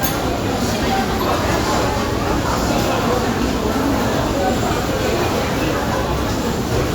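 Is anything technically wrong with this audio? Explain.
Yes. At 4.25 s a run of compressed frames is skipped: about four frames never reach the output, either missing from the file or rejected by the decoder as damaged. With frames about 26.1 ms long, the sound jumps forward by roughly a tenth of a second. Adjacent frames overlap, so the seam is a short smeared blip rather than a sharp click, and the listener hears the sound lurch ahead with a small piece gone.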